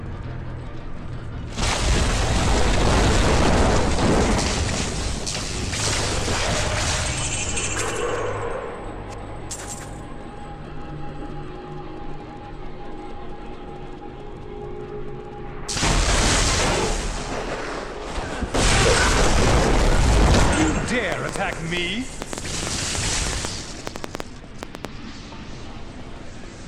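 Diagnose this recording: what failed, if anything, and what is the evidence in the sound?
A train of clicks runs from 20.6 to 24.86 s: about 5 per second, unevenly spaced, about 15 dB above the sound. They add pulses rather than cutting gaps, which likely points to analogue-wiring interference.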